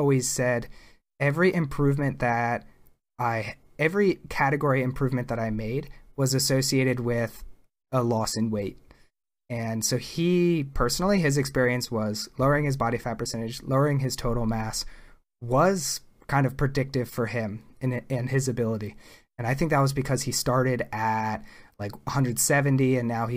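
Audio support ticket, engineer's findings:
No faults found on listening; speech path checked, nothing to flag.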